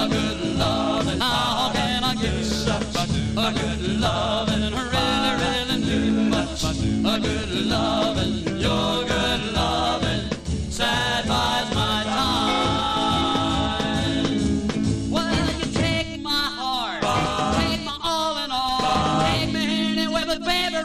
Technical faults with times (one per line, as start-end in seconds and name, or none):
1.20 compressed frames skipped
17.24 compressed frames skipped
20.21 compressed frames skipped